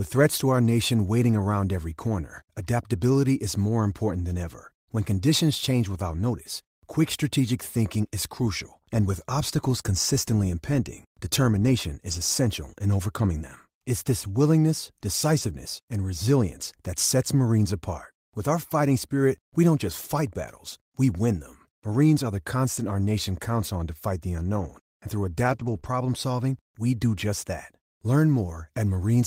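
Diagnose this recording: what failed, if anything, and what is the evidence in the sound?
Network loss recovered in the codec: at 0.65–0.71, 12.07–12.17, 24.59–24.65, 25.43–25.77 and 25.84 s the sound turns rougher and noisier without any gap. These are lost packets rebuilt from error correction. The decoder played the low-bitrate copy carried in the following packet, about 180 ms of it in the longest stretch.

Network loss concealed by the decoder: at 25.79–25.84 s there is a brief smear inside the degraded cluster. This is short concealed packet loss. About 20 ms arrived too late and had no usable copy, so the receiver extended the preceding sound to fill it and then blended back into the real audio.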